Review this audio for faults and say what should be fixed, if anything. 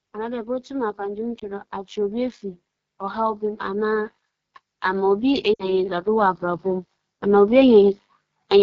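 The speech carries plainly audible AMR wideband (HD Voice) codec damage from start to finish: a rough, raspy texture consistent with the 8.85 kbit/s mode, one of AMR-WB's lowest rates. At this rate the pulse-driven vocal tract model cannot represent the voice cleanly below 6.4 kHz, and the band above that is only shaped noise. Prevention: carry the call at 12.65 kbit/s or higher.

Automatic gain rising occurs twice. From 0.13 to 2.43 s the level swells by about 4 dB, and from 4.83 to 7.98 s by about 7 dB. Voice and background rise together because the AGC judged the input too quiet and slowly increased its gain. Prevention: set the input level correctly so the AGC does not need to climb.

Lost AMR speech frames cause a brief dip or warble at 1.39 to 1.46 s, about 20 ms, which fits one lost frame. At 5.54 to 5.63 s there is a longer dropout of about 60 ms that falls to near silence, which fits three consecutive frames. 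In both cases the decoder repeated the last good parameters at falling gain, and the voice resumes weak for a moment. Prevention: improve radio link quality or strengthen channel protection.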